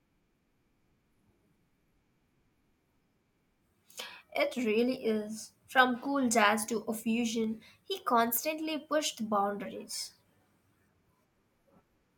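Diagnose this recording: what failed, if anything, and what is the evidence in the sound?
Two devices in the chain likely run on separate clocks that disagree by a couple of hundred parts per million, so the buffer between them drifts until a handful of samples is dropped or repeated. These clock drift buffer slips give a click every 0.83 s through the speech, about fifteen in all, from 0.81 s to 11.59 s.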